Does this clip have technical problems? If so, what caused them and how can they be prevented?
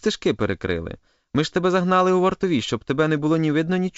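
No, nothing stood out on listening to this speech, which comes through as wideband telephone audio consistent with G.722 coding at 64 kbit/s.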